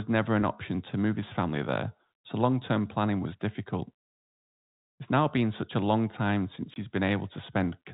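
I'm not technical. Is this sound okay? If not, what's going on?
No. At 6.74 to 6.76 seconds, just after "a long time since", the speech drops out for about 20 ms. This is packet loss filled with silence: a couple of small chunks of audio never arrived, and the receiving end played nothing in their place. The gap is short, and the silence starts and ends abruptly. The gap length fits two 10 ms packets going missing together. The telephone-style G.711 coding still sounds narrow and phone-like, as that format always does.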